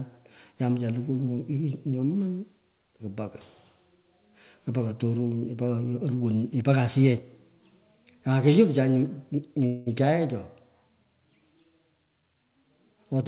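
At 9.66 to 9.88 s a fading buzz interrupts the speech, which then resumes intact: a call audio freeze, likely packets delayed past an emptied jitter buffer.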